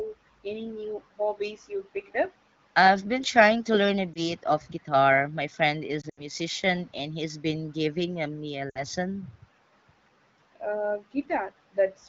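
Lost AMR speech frames at 4.14–4.28 s, 6.01–6.21 s and 8.69–8.84 s. The decoder replays the last pitch and vocal-tract settings at falling gain, so each gap sounds like a brief warble or a smeared, fading dip.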